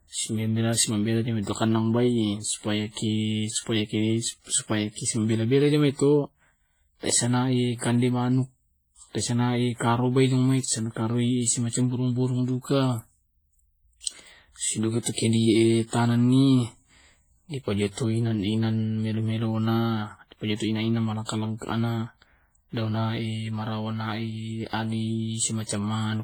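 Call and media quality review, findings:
Speech throughout sounds ringing and washy, with hiss breathing along with the voice. Likely heavy WMA compression, long transform blocks smearing quantisation noise. The damage fits a low bitrate, around 24 kbps.

Pre-echo before sharp attacks at 15.13, 21.25, 24.68 and 25.65 s, with the quantisation hiss smeared 40 to 51 ms ahead of each onset and the attacks softened.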